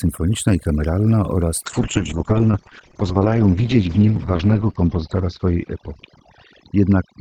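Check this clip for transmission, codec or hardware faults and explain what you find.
Two faults are audible: overdone noise removal across the whole recording, and a call bitrate drop in its later part.

Throughout, the background sits at near silence dotted with twinkling specks. Noise reduction was set too aggressively, so individual frequency bands close to its noise estimate were pulled down or muted, carrying the softer parts of the speech away with them.

From 1.67 s, right after "i kameralna oraz", to the end, the speech turns rough and muffled. The call bitrate drop took the encoder from 32 to 8 kbps, holding at the lowest rate for 2.85 s; Opus coded more coarsely and also cut the bandwidth from 20 kHz to 6 kHz.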